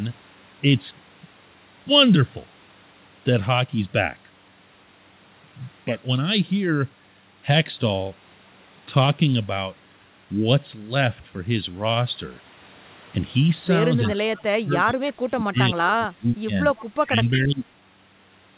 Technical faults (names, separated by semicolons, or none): echo leak; speech suppressed in double talk